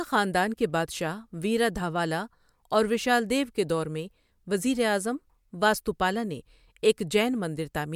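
No technical faults can be heard anywhere in the recording; the signal stays continuous and steady throughout.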